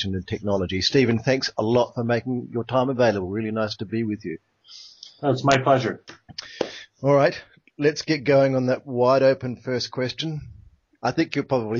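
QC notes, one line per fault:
No faults to note.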